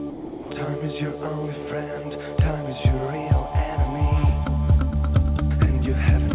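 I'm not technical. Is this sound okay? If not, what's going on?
No. Between 0.1 and 0.5 s, the sender's voice detector likely judged the sound to be background and stopped transmitting. This is sound dropped by the voice detector: for those 0.4 seconds, the real audio is replaced by a soft, steady hiss, and then the sound returns.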